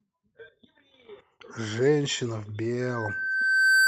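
From 2.80 s to the end, loudspeaker feedback squeal: the microphone re-amplifies its own loudspeaker, and a 1.6 kHz tone swells over about a second to roughly 10 dB above the speech.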